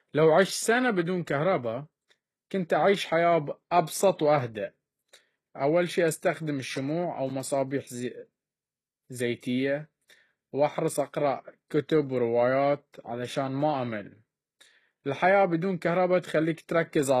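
From start to finish the speech has a bright but synthetic top end. The s sounds come out gritty and lispy with a metallic sheen, and nothing is present above about 12.4 kHz. The likely cause is HE-AAC compression at a very low rate, which fits a bitrate around 16 kbps. The codec encodes only the lower band and fills in the treble by copying those lower bands upward, so the rebuilt harmonics fail to match across the join.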